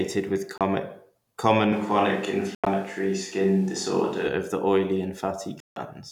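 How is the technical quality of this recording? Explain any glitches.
The recording has two kinds of fault: short holes in the sound at three points and a stretch that sounds as though it comes from a different microphone.

Bluetooth dropout, at 0.58 s, 2.55 to 2.67 s, and 5.60 to 5.76 s: the gaps are likely caused by wireless audio packets arriving too late and being discarded. The output falls silent, and the speech resumes further along, as if it had kept playing. The first gap is about 29 ms. The second loses about 102 ms spread over 116 ms, with its longest break 87 ms. The third, right after "of the oily", lasts about 160 ms.

Switch to a distant microphone, from 1.73 to 4.27 s, starting just before "of the oily": the sound abruptly turns roomy and hollow and thinner in the bass, then snaps back. This is likely because the close microphone's signal dropped out and a farther pickup took over. 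The level hardly changes, but faint room noise becomes audible, roughly 35 dB below the speech.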